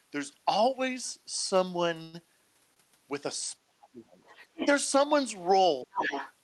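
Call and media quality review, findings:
Call audio freeze, 2.02–2.26 s: sound stops and the last bit trails off as a fading buzz for roughly 0.1 s, then picks up exactly where it left off with nothing lost. Likely packets held up in transit, draining the jitter buffer.

Short stall from a late packet, 2.74–2.78 s: the sound gets held about 23 ms too long, with a slight buzz or dip. One packet missed its slot, the jitter buffer ran dry, and the receiver stretched the last sound until it showed up.

Speech suppressed in double talk, 3.66–4.13 s, 4.46–4.61 s and 5.84–5.96 s: the talker ducks hard, down about 40 dB in the first two and about 30 dB in the third. Likely the echo canceller couldn't separate them from the far-end echo and squashed both.

Other side's voice leaking through, 4.25–4.67 s and 5.92–6.33 s: a second voice bleeds in, about 10 dB below the talker the first time and only about 5 dB below the second. 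Likely loudspeaker pickup that the echo canceller didn't fully remove.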